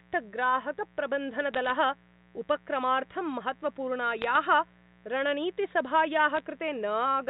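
A steady mains buzz runs the whole way through, about 30 dB under the speech: 60 Hz switching spikes whose raspy upper harmonics set it apart from a smooth hum. Bit errors on a digital phone line break in at 1.54 to 1.70 s, 4.19 to 4.36 s and 6.36 to 6.40 s. Flipped bits on the mu-law line corrupt single samples into sharp ticks, a brief crackle rather than dropouts or smeared sound.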